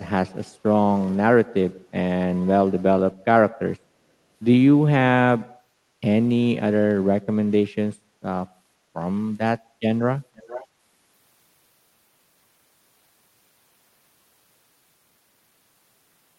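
At 10.36 s, running to 10.67 s, there's a brief echo leak: a faint copy of the speech comes back roughly half a second late, well below the main level. Most likely a loudspeaker-side echo canceller let some pickup slip through the call path.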